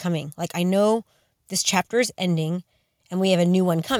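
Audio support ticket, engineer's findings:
Microphone volume stepped up at 3.99 s, right at the tail of the speech clip: voice and background jump together by about 8 dB in one step. Points to the call software's auto input gain deciding the mic was too quiet and bumping the device level.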